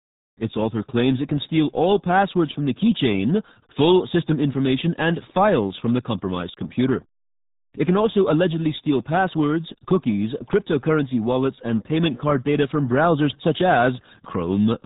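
Throughout, the speech carries heavy RealAudio 14.4 codec damage: a low-rate dial-up codec, likely near 8 kbit/s, cuts everything above 3.8 kHz, leaving muffled, gargly speech.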